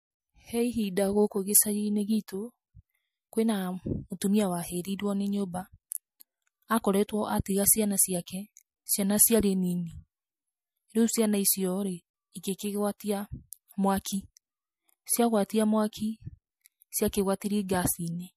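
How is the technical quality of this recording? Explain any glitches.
One codec glitch stands out in the speech. Pre-echo at 12.98–13.00 s: a sharp attack's quantisation noise, about 24 dB up, smears 26 ms ahead of it as hiss, which fits a 36 ms transform block with no short-block switching.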